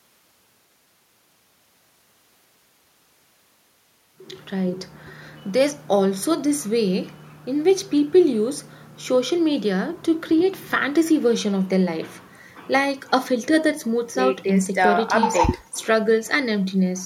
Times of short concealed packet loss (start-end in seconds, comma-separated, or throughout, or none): none